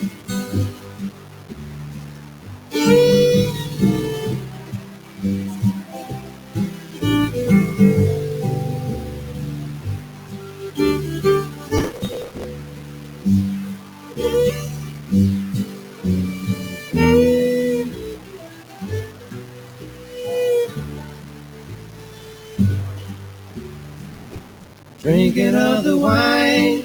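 Throughout, the audio was likely reduced to about 5 bits with plain rounding and no dither. The error tracks the signal, leaving gritty, grainy distortion only around fifteen decibels below the sound. A speech-tuned noise suppressor also runs on this non-speech material, pumping levels by around ten decibels. It treats sustained parts as noise and pulls them down by about 5 dB at 0.11–2.72, 4.64–6.96 and 10.0–10.6 s. From 11.77 to 12.44 s, processor overload crackle appears. The system is missing buffer deadlines of roughly 5 ms and skipping around a hundred of them, which tears the sound with hard-edged gaps. The suppressor cuts the sound again at 12.65–14.09, 15.79–15.99 (about 4 dB), 18.19–20.12 and 21.14–25.02 s. Held and fading sounds sink there. A second crackle burst lands inside that last cut, at 24.09–24.71 s.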